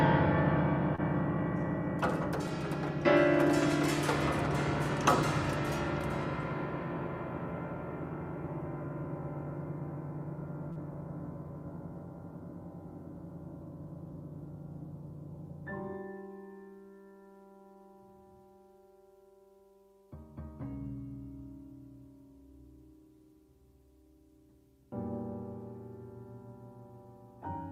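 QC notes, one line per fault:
0.95–1.00 s, short concealed packet loss: about 20 ms of audio arrived too late, so the decoder extended the preceding sound for 27 ms, leaving a brief smear before blending back.
10.72–10.78 s, short concealed packet loss: roughly 40 ms went missing and was patched with 34 ms of continued prior sound, heard as a short wobble where the real signal drops out.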